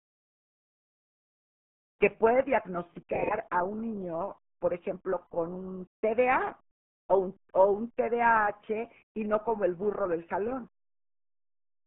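From start to finish the speech carries the RealAudio 14.4 codec's heavy damage: a muffled, gargly, band-limited sound whose coarse coding suggests an 8 kbit/s stream. On a spectrogram, energy sits roughly between 150 Hz and 3.4 kHz, with nothing above 3.6 kHz.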